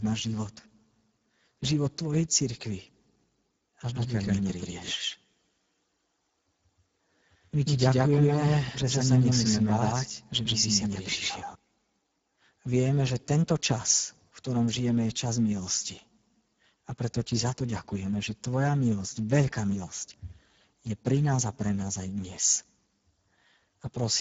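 From start to finish the speech carries plainly audible Speex codec damage. This CELP coder has too few bits to rebuild the excitation, so the speech comes out hoarse and grainy, which fits a setting near 10 kbps. Nothing is present above 7.7 kHz, and the top band sounds like shaped hiss rather than real detail. That noise-like upper fill sets it apart from a plain low-pass or from MP3-style swirling artefacts.

From 3.95 s to 11.55 s a doubled audio track is heard. A second full-band copy of the speech runs about 150 ms behind the first, at roughly the same loudness. It is likely an extra capture through a slower path. Unlike an acoustic echo or reverb, the copy has no decay, no repeats and no room colour. It appears and disappears abruptly at those two times instead of fading.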